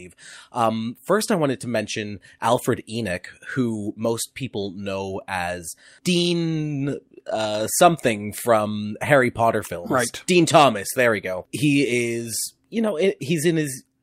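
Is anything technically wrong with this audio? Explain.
No, nothing stood out as a technical problem when listening to this speech recording.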